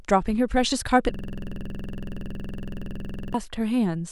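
From 1.14 s to 3.34 s the speech locks into a system hang loop: the driver stalled while the hardware kept replaying one 46.4 ms ring buffer, consistent with a 2048-sample buffer. It repeats 47 times as a 21.5 Hz stutter-buzz, visible as identical repeating waveform blocks and evenly spaced vertical stripes on a spectrogram.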